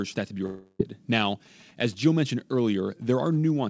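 Right after "for that to be", from 0.46 to 0.81 s, the last sound is drawn out into a buzzy, hissing tail that fades over about a third of a second, then drops to a brief silence of about 20 ms before the talker returns mid-stream. This is likely a long network dropout: audio stopped arriving, the receiver stretched what it last had to cover the hole, and when packets resumed, roughly 340 ms of speech was simply gone.

From 1.24 s until 3.59 s a galloping dit-dit-dit of short buzzes runs under the speech, pulsing at 217 Hz and sitting around 30 dB below it. These are GSM signalling bursts: a nearby 2G phone was exchanging brief groups of radio bursts with the network, as it does before a call or message arrives, and the audio circuitry rectified that radio energy into an audible buzz. The speech itself carries nothing above 8 kHz, as expected from the G.722 call path.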